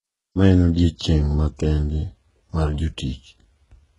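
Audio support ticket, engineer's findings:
Gritty, metallic sibilance and lispy s sounds across the whole speech clip; treble synthetic, hard ceiling around 11.1 kHz. Likely HE-AAC compression: upper band rebuilt by spectral band replication, harmonics misaligned at crossover. Heavy damage, consistent with roughly 12 kbps.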